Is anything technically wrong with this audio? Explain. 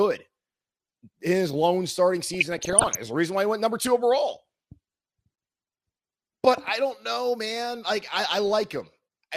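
Yes. The speech carries DAB burbling from 2.34 to 2.96 s. Over this stretch of about 0.6 s, weak reception lets bit errors slip past the error correction at a rate of a fraction of a percent, corrupting the MP2 audio data. Damaged samples put short blips of noise into single sub-bands, and damaged scale factors make sub-bands leap in level for up to a frame. The length suggests a couple of dozen consecutive frames were affected. The result is a burbling of short noise blips and level jumps laid over the speech.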